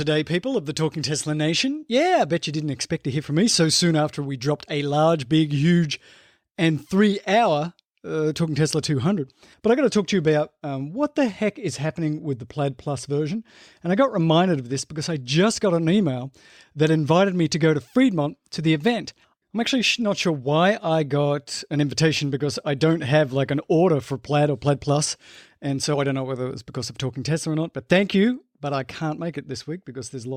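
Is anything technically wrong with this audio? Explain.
No, nothing technically wrong can be heard in this speech recording. There is no fault at any point in the clip.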